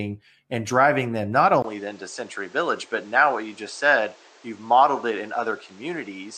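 At 1.62 s, right after "and driving them not", the sound drops out for about 20 ms and returns duller, with nothing above 8.7 kHz and a new background noise roughly 30 dB under the speech. It stays that way to the end. The loudness barely changes. This most likely comes from the input switching to a poorer device. A filter or EQ change would narrow the band but wouldn't bring a brief gap and a different noise floor with it.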